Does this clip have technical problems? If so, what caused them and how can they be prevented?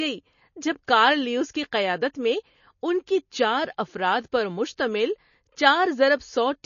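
Yes. Throughout the speech, the treble stops dead at about 6.9 kHz and the sound has a watery, swirling quality, with s sounds turning metallic and chirpy. This is likely MP3 compression at a low bitrate, around 32 kbps. Starved of bits, the encoder drops everything above that cut-off and zeroes weaker frequency lines, which flicker on and off from frame to frame. On a spectrogram this shows as a flat ceiling at 6.9 kHz with patchy, speckled holes below it. To prevent it, record and deliver uncompressed or at a much higher bitrate.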